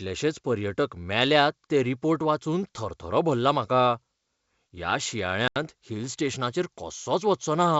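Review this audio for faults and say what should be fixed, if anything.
Packet loss on an ADPCM call at 5.48 to 5.57 s: about 80 ms, roughly seven packets, drops to hard-edged silence. The decoder's adaptive predictor and step size then mismatch the sender's, so speech resumes with brief, slight distortion. Prevent it with packet loss concealment and decoder state resynchronisation, backed by jitter buffering on the G.722 stream.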